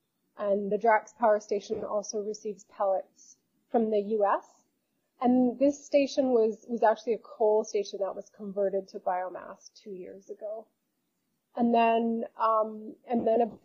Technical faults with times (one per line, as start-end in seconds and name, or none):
none